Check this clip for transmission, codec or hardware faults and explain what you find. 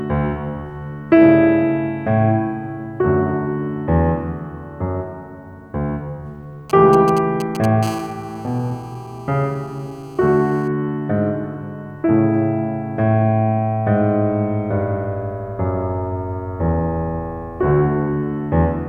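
Two hardware interference faults from a nearby 2G phone are audible in the music.

From 6.70 to 7.66 s, GSM signalling bursts: the audio circuit rectifies short radio bursts, giving galloping ticks and brief 216.7 Hz buzzes roughly 10 dB below the music.

From 7.83 to 10.68 s, GSM phone buzz: call transmission bursting 216.7 times a second gets rectified, producing a steady, raspy, harmonic-rich buzz about 25 dB below the music.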